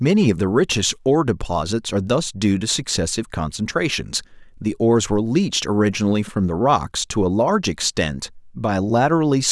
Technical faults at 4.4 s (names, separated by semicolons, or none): none